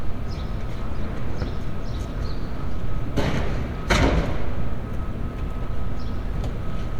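Listening to these everyday sounds, nothing stood out as technically wrong at any point.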